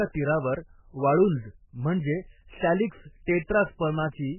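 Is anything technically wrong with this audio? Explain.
Yes. Throughout the speech the sound is dull and boxed-in, with nothing above 3 kHz, so s sounds lose their hiss, and what remains has a watery, swirling texture with metallic warbling and smeared consonant onsets. This is likely heavy MP3 compression, at a starved bitrate consistent with roughly 8 kbps. The encoder chops off all treble at a fixed cut-off and discards weaker frequency components, which then flicker in and out between frames, creating that unstable, underwater character.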